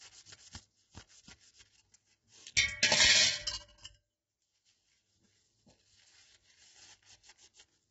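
From start to finish the sound is rough and grainy, with a hissy, smeared texture filling the gaps where tonal detail should sit, and the top end stops dead at 7.8 kHz, leaving everything dull and boxed in. The damage is heavy and constant. The likely cause is low-delay AAC compression (AAC-ELD), whose very short frames resolve tonal structure poorly and spend bits inefficiently, consistent with a starved rate of around 16 kbps.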